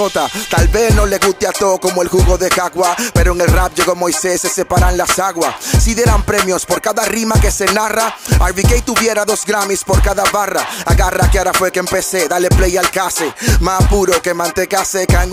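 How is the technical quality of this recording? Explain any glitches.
No glitches or dropouts heard.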